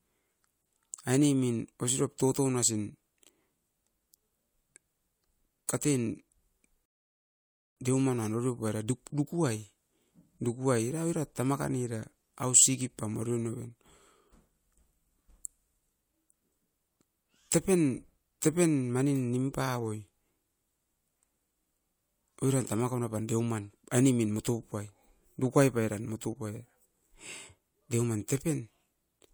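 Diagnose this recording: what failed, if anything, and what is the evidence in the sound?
The playback side gave out here, a classic rebuffering stall. At 6.86 s the speech just drops into dead silence, and at 7.77 s it picks up again exactly where it left off, with no missing syllable and no jump. So the player simply ran dry on downloaded audio and sat waiting for the network to deliver more. Nothing's lost, but the gap adds about 0.91 s to the running time.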